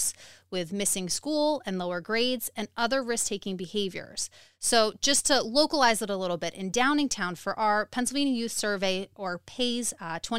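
No technical faults can be heard anywhere in the recording; the speech signal stays continuous and stable throughout.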